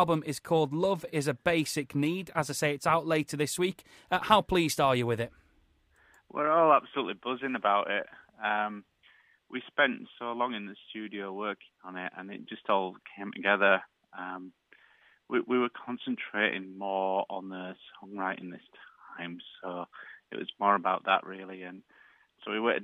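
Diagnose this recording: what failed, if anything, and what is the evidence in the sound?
Nothing failed; no stage shows any audible fault.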